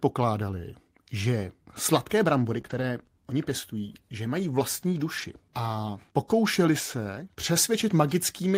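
Right after "že sladké brambory", at 2.61 s, a short concealed packet loss leaves about 25 ms of the speech stretched from the preceding sound. It comes across as a brief smear or wobble rather than a true gap, because the receiver extrapolated audio it never received.

From 2.66 to 2.84 s, before "oni pěstují že mají", the lost audio is rebuilt from error correction. A low-bitrate copy fills the gap, so the speech continues without a break but sounds rougher and noisier. The same happens from 5.18 to 5.24 s, ahead of "a pokoušeli se".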